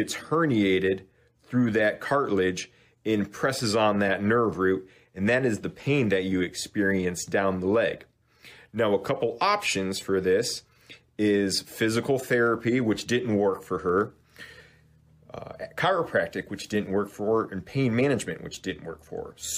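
From 0.17 s to 19.5 s, clock slip clicks run through the audio. Faint ticks repeat about every tenth of a second, forming a soft rattle. Two unsynchronised clocks likely differ by around 300 ppm, so one sample slips each time.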